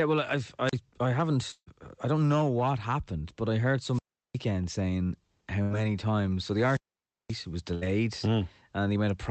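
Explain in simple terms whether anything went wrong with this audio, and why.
Wireless microphone squelch dropout at 0.66–0.73 s, 3.90–4.39 s and 6.52–7.48 s: the radio signal weakened, hiss rose, then the receiver muted for about 37, 360 and 530 ms before the speech returned.

Long network dropout, likely, at 1.51–1.69 s: audio stopped arriving, so the last sound was stretched into a fading buzz or hiss, then briefly went silent. About 160 ms of speech was lost.

Burst of packet loss at 5.62–5.73 s and 7.74–7.84 s: a short run of audio was lost or arrived too late. The last sound was held and faded, and about 80 ms went missing each time.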